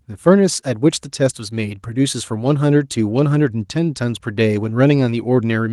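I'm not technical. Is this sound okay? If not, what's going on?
Yes, this sound is okay, and there's nothing going on that needs fixing.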